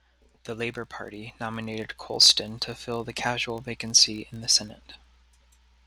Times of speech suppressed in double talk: none

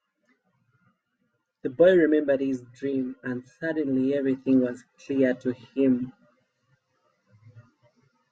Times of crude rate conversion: 4.76-8.32

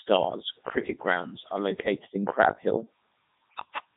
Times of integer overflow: none

